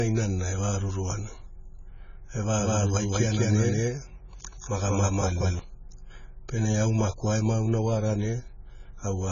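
A speech recording that sounds squeezed all the way through. Nothing gets above 7 kHz, so it's dull and boxy, and the heavy damage shows up as a smeared, warbly, fizzy texture on sustained sounds and sibilants. That's most likely AAC compression, AAC-LC starved of bits at around 16 kbps, so the encoder dropped its cut-off and left gaps in the spectrum. Then from 2.59 s to 5.59 s there's a doubled audio track. A second full-band copy runs about a fifth of a second behind, at roughly the same level as the original, so everything in that stretch gets a flat, dry echo with no room tail. It cuts in and out abruptly at both ends, which likely means the same signal was captured twice, once through a slower path.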